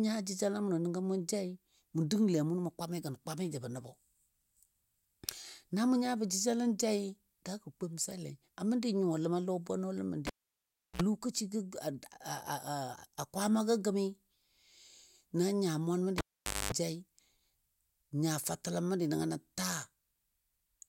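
At 10.27 s a cable pulled and plugged in interrupts the speech: a pop, about 0.70 s of near silence, a 58 ms burst of 60 Hz mains buzz as the tip touches, then a second pop at 11.02 s. The same thing happens at 16.18 s, with about 0.49 s unplugged and a longer 230 ms buzz at 50 Hz before the pop at 16.72 s. The hum between the pops sets this apart from a plain dropout.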